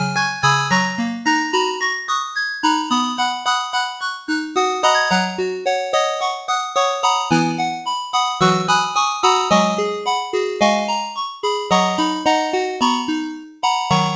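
A noise suppressor built for speech was left running on these everyday sounds, so it treats sustained tones, room ambience and decaying tails as noise to remove. Across the whole clip the gain rides up and down by roughly 5 dB: onsets pass mostly intact while anything held or fading is pulled down, giving a pumping, breathing quality and a thinner body than the sound should have. The top end, which stops at 8 kHz, is consistent with a wideband call codec such as G.722.

From 3.87 to 4.3 s the suppressor misjudges a stretch of the sound as noise and clamps down harder than anywhere else, with the deepest cut reaching about 15 dB. Over that 0.4 s the level sags noticeably, so the sound seems to duck away before the gain recovers.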